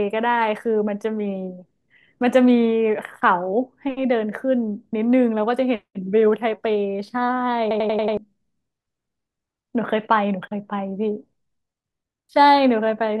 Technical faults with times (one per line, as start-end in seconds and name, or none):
7.71-8.17 system hang loop